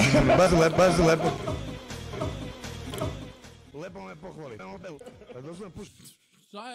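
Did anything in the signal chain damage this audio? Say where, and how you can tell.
Yes. Compressed frames were skipped at 0.46 s, 2.13 s and 4.59 s, a fault at the codec decoding stage. The sound jumps ahead by whole 32 ms frames, about two frames at the first two points and roughly half a second at the last.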